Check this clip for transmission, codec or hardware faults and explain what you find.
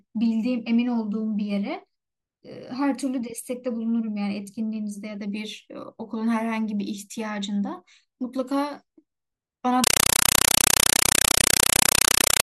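One fault is present. From 9.84 to 12.45 s, the speech is replaced by a compressed stream played as audio. Undecoded Dolby Digital data, which fits a 256 kbps AC-3 stream, is treated as samples. The result is very loud static bursts of 5.33 ms, each followed by silence, repeating at 31.25 Hz. This rigid, regular chatter distinguishes it from random digital dropout noise.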